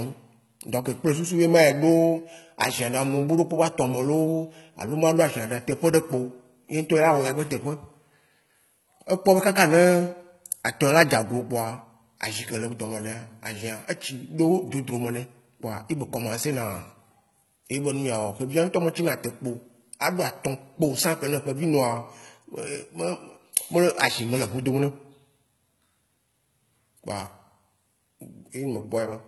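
The whole recording carries heavy HE-AAC compression damage, likely from a very low bitrate around 16 kbps. The treble is rebuilt from lower bands rather than coded, so s sounds come out gritty and metallic, and nothing survives above 11.8 kHz.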